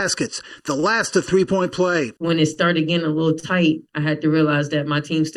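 Throughout, the sound is hollow and phasey: channel delay (comb filtering) from one channel lagging the other by under a millisecond before the mono sum, cutting fixed, evenly spaced notches starting near 700 Hz. Unlike plain muffling, the dullness has a regular comb pattern.

At 0.80, 2.54 and 3.40 s, short stalls from a late packet hold the current sound about 33, 20 and 30 ms too long, then resume where they left off. Unlike a dropout, nothing is skipped. The sound just runs slightly later afterwards.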